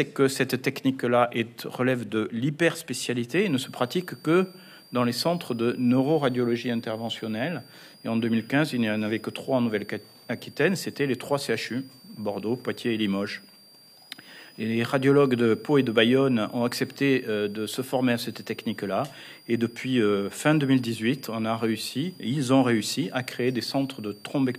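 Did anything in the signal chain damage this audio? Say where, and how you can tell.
Yes. A switching supply whistle sits in the analogue power wiring from 3.3 s onward. It's a high tone wandering between 4.5 and 4.9 kHz, roughly 30 dB down, from a switching supply running in an audible burst mode or beating with another one.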